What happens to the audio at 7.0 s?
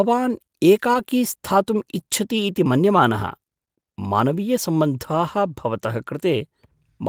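Nothing goes wrong at 7.0 s; the speech carries on intact through that moment to the end of the clip.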